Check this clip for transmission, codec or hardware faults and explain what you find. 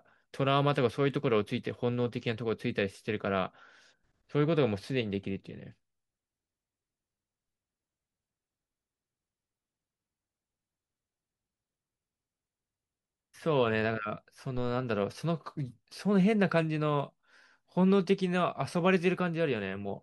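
One hardware fault is present in the speech. At 14.57 to 14.74 s there is a phantom power thump: a supply switched on or off on a live input sends a voltage step through the coupling capacitors, giving a deep thump peaking near -29 dBFS and decaying within about 37 ms.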